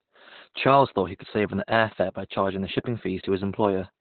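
Speech here, and it's Opus voice compression throughout: narrowband SILK coding cuts everything above about 4 kHz and leaves it muffled, hoarse and robotic, which fits roughly 8 kbps.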